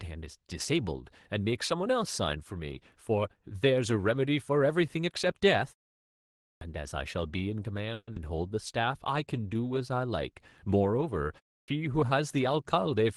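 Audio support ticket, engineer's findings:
Clipped start after a pause at 6.57 s, following a 0.91 s gap. The output device was asleep and took about 42 ms to wake, so the onset got eaten.

Same clipped start again at 11.64 s, after a shorter 0.32 s pause. Roughly 39 ms of the attack went missing while the device relocked.

Audio breaks up from 7.93 to 8.19 s. About 230 ms was filled with a fading buzz, with a brief 40 ms of silence before it recovers, and 120 ms of the sound never came back. Likely a long network dropout, with the delay shifting by around 50 ms afterwards.

Sound drags at the same pitch from 9.36 to 9.95 s, running at 88% speed with 77 ms stretched in. That's the jitter buffer slow-down, repeating pitch periods to rebuild its reserve.

Opus call path band-limited at 12 kHz.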